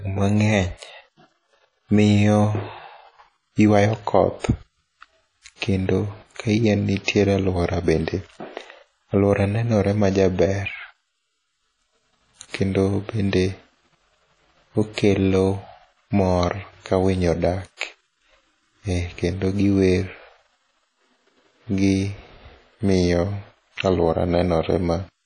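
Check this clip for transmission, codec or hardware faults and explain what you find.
The speech shows two codec faults: steady compression damage throughout and two brief pre-echoes.

WMA compression, likely at a low bitrate around 32 kbps, runs throughout. Weak spectral lines are dropped, leaving washy, ringing audio. A spectrogram shows nothing above 10.1 kHz and gappy, smeared harmonics.

Pre-echo occurs at 7.04 to 7.08 s, just before "aluora bende", and at 17.77 to 17.81 s, spreading 37 ms and 44 ms. Block noise leaks ahead of each attack as hiss, visible as a smear preceding the waveform onset.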